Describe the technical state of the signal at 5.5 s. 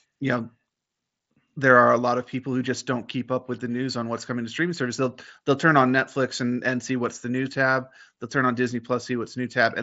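At 5.5 s the speech is intact, carried through the Bluetooth mSBC headset codec with its usual ceiling of about 7.7 kHz and no fault at that moment.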